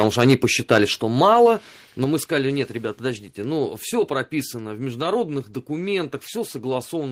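Right from the start, 0 to 0.45 s, and again at 0.71 to 0.78 s, the loudest syllables pick up a harsh, crackly edge. That's microphone overload. The peaks run about 4 dB past the converter's limit, so their tops get sheared flat. The first stretch only clips a small share of samples, but the short burst at 0.71 s clips about a tenth of them. The likely cause is the mic input gain being set too high for this speaker.

Then at 1.02 s the whole level, voice and background together, drops by about 4 dB in one step, and at 2.04 s it drops by about 5 dB more, just before "мы сказали нет ребят". That's the microphone volume being stepped down. The call software has likely reacted to those clipped peaks by pulling the device input level down a notch each time. You hear it as two abrupt downward jumps in loudness rather than a smooth fade.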